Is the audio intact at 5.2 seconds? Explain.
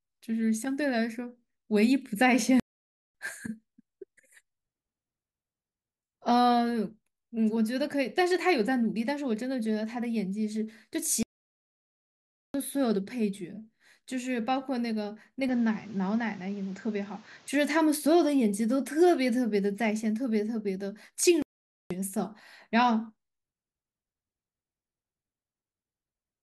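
Yes, the audio is intact at 5.2 seconds, with no fault audible at that moment in the speech.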